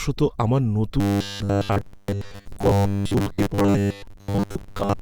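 From 1.0 s to the end at 5.01 s, the speech takes on robotic sound from repeated short buffers: a rigid, metallic buzz fixed at 100 Hz that only loosely tracks the speech. Most of the audio is likely being replaced by repeats of a 10 ms buffer.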